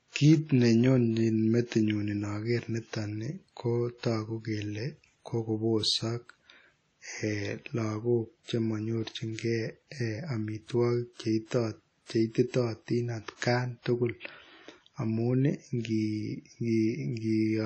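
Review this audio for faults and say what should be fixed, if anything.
The speech runs dull and smeary for the whole clip, with the top end gone above about 9.2 kHz and a washy, ringing haze that swells and fades with the voice. That points to WMA compression, likely at a low bitrate somewhere around 32 kbps, where the encoder spreads its quantisation noise over long blocks and simply drops the weaker high detail. The damage is plainly audible. Re-export from the original source uncompressed, or at a much higher bitrate, before it goes anywhere else.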